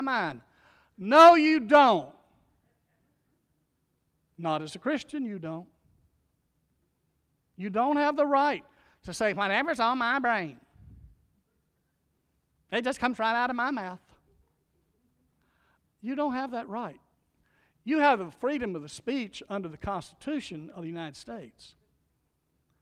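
No technical faults can be heard anywhere in this speech.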